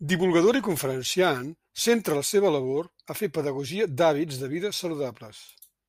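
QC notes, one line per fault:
Nothing stood out on listening to this speech clip.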